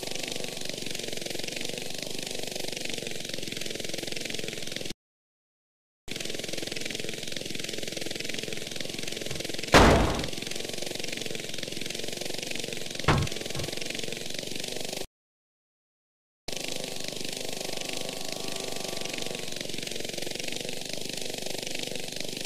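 At 4.92 s and again at 15.05 s, playback stalls, the sound going fully silent for about 1.16 s and 1.44 s, likely a starved or blocked player, far longer than brief packet-loss dropouts.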